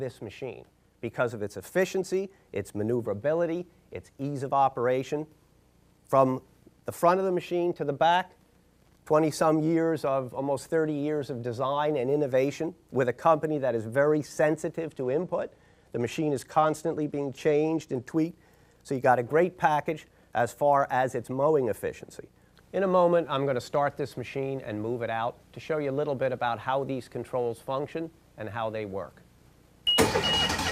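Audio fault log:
14.86–18.12 s, Bluetooth SBC bit pool drop: the treble dulls and a gritty noise rises, which fits the bit pool falling from about 28 to 13 (roughly 102 kbps) on a congested link, starving the upper sub-bands and coarsening quantisation until the rate recovers.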